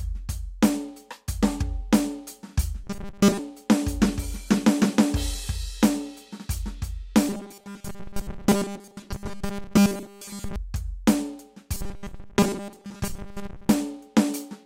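At 2.84 to 3.39 s, 7.29 to 10.56 s and 11.74 to 13.70 s the music collapses into a rigid metallic buzz at 200 Hz: robotic sound from repeated short buffers, likely a 5 ms slice looped over and over while most of the real audio gets skipped.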